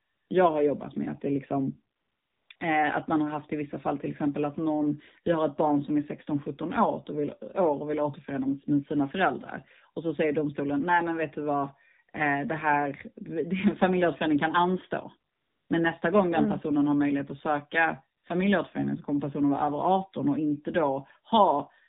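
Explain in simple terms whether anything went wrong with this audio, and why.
Yes, two things went wrong. The whole recording went through the AMR narrowband mobile codec, the old phone-call format. Everything above 4 kHz is gone, so the speech sounds muffled and buzzy. Unlike a simple muffled recording, it also has a synthetic, robotic edge.

There is also AMR comfort noise in the pauses, at 0.0–0.3 s, 1.96–2.50 s, 2.56–2.60 s, 15.32–15.70 s and 18.18–18.24 s. The phone stopped sending sound and filled each gap with smooth artificial hiss. Unlike a dropout, these gaps aren't silent, and the hiss switches on and off abruptly.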